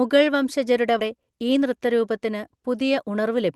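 At 0.99 to 1.01 s there is a skip ahead: roughly 0.4 s of speech was discarded and playback jumps straight forward with no filled gap. The waveform shows two unrelated stretches butted together, and the spectrogram shows harmonics and formants changing abruptly at one vertical seam.

From 1.15 to 1.72 s, and again from 2.90 to 3.51 s, jitter buffer speed-up runs at 111% and then 110%. Each time the receiver repeatedly trimmed one or a few pitch periods to shed about 70 ms of excess buffered delay, so the speech sounds hurried at unchanged pitch. The spectrogram shows compressed syllables with harmonic spacing intact, and the waveform shows whole periodic cycles removed.

The Opus call path's band-limiting is visible as energy ending near 12 kHz, which fits a moderate bitrate of around 32 kbps.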